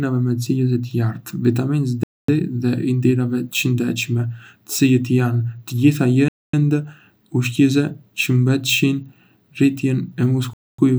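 Speech interrupted by a gap between chunks: three holes of silence, each 250 ms long, at 2.03 to 2.28 s, 6.28 to 6.53 s and 10.53 to 10.78 s, with a steady 4 s of sound between them. Unlike a dropout, nothing is missing. The speech picks up exactly where it stopped, so the delivery is paused rather than cut. That points to audio sent in 4 s chunks with padding or a late start inserted at each join.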